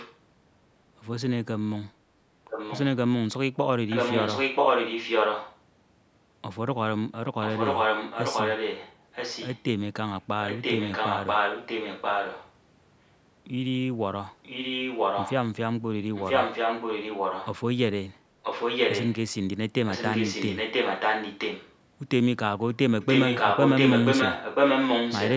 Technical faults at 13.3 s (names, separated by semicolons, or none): none